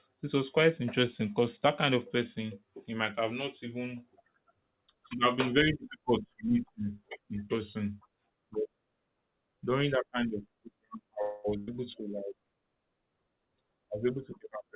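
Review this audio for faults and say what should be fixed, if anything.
The first fault is a call audio freeze from 11.22 to 11.46 s, likely caused by packets stalling in transit so that the jitter buffer ran dry. The receiver bridged the wait by extending the last sound for about 0.22 s as a fading buzz or hiss, with no drop to full silence. When delivery resumed, the speech picked up exactly where it had stopped, so nothing is lost but a 221 ms pause has been inserted. Keeping a steadier network path, or allowing the jitter buffer a larger margin, would prevent these stalls.

Right after that, a burst of packet loss runs from 11.58 to 11.69 s. Roughly 100 ms of packets were lost or arrived too late to play, and the receiver concealed the hole by stretching and fading the preceding sound for about 90 ms. The result is a brief held buzz or hiss, after which the speech resumes further along with that stretch missing. 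Forward error correction or redundant packets would let the receiver rebuild short bursts like this.

The last fault is a jitter buffer speed-up from 14.13 to 14.70 s. Following the earlier disruption, the buffer was holding more audio than its target, so the receiver trimmed short pitch-period pieces in rapid succession, removing something around 70 ms in total. The speech plays at about 112% speed with its pitch unchanged and sounds briefly hurried. A gentler catch-up rate, spreading the removal over a longer stretch, would keep the acceleration from being heard.

Throughout the clip, nothing reaches above 4 kHz, which fits the narrowband G.711 mu-law call codec.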